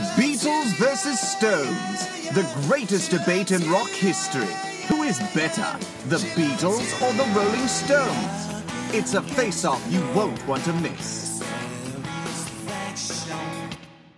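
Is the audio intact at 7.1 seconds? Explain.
Yes, the audio is intact at 7.1 seconds, with no dropout, distortion, glitch or other fault at that point.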